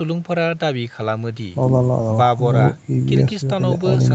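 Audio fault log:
No faults are audible in the speech. The sound stops at about 8 kHz, which fits a call path carrying Opus at its wideband setting.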